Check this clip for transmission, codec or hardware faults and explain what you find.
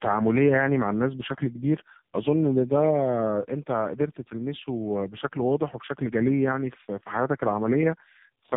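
One fault runs throughout: tandem speech coding. The speech sounds rough, muffled and warbly, with nothing above 3.7 kHz. It fits two low-rate speech codecs in a row, G.729A at 8 kbit/s then AMR-NB at 6.7 kbit/s via G.711, each recoding the previous coder's already degraded output, so their distortions stack.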